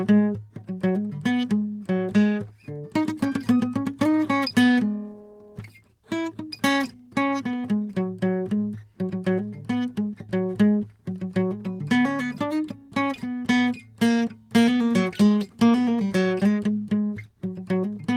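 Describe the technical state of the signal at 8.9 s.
At 8.9 s the music plays through intact, with no dropout, click, distortion or other technical fault at that moment.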